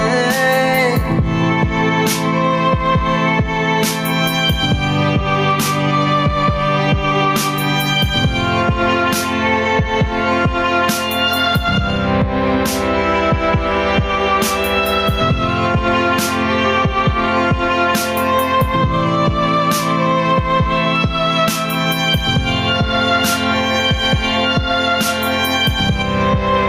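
Gain pumping runs throughout, with the level swinging by around 5 dB, leaving the audio squashed. The likely cause is input gain set far too high, with a fast limiter clamping down on loud peaks.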